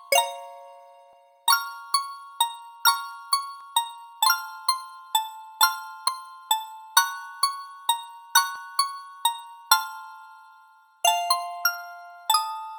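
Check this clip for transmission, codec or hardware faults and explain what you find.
There is one recurring fault: audio missing between chunks, at 1.13, 3.61, 6.08, 8.56 and 11.03 s. The likely cause is a processor working in 2.5 s chunks and dropping roughly 30 ms at each handover. Each time, the sound skips abruptly forward, with no silence across the join.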